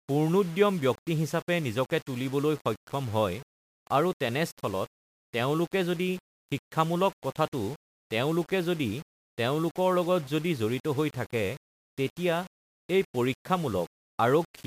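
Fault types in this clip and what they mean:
Low bit depth without dither: grainy, signal-dependent distortion runs through the whole speech clip, with quiet passages turning harsh and the softest sounds sputtering or dropping to silence between levels. This is likely the result of coarse quantisation, consistent with roughly 6 bits rounded without dither, so the error tracks the waveform instead of forming a steady hiss. The resulting noise sits only about 25 dB below the speech.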